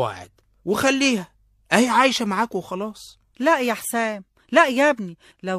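No technical faults can be heard anywhere in this speech recording. Nothing in the audio points to a problem in how it was captured, processed or delivered.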